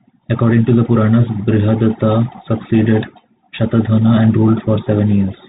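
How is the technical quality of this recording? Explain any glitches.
The technical quality is poor. The speech carries Bluetooth CVSD headset codec damage throughout. Its one-bit adaptive delta coding cuts everything above 4 kHz, scratches sibilants, distorts loud high sounds, and leaves granular hiss underneath.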